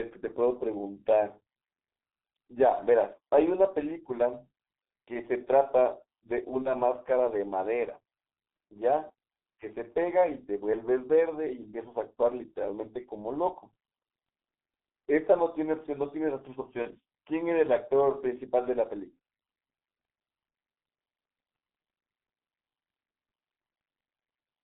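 Speech coded with the G.723.1 codec throughout, and heavily damaged by it. The line band runs only from about 200 Hz to 3.7 kHz, so the sound is muffled and thin, and the very low bitrate, consistent with the 6.3 kbit/s mode, leaves a hoarse, rough texture with smeared consonants. The coder's slowly updated vocal model cannot follow fast changes in the speech, which blurs onsets and transitions. VoIP packet loss concealed by the speech codec occurs twice, at 6.62–6.73 s and 16.82–16.87 s. Each gap matches a single lost 30 ms frame. The decoder filled it by extending its last pitch and spectral shape at falling gain, heard as a brief, stretched, fading sound. Because each decoded frame depends on the previous one, the distortion persists for tens of milliseconds or more past the missing 30 ms before the speech recovers.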